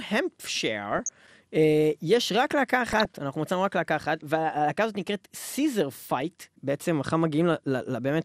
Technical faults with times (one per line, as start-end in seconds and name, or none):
0.00-8.24 MP2 compression
0.82-1.09 DAB burbling
2.91-3.05 DAB burbling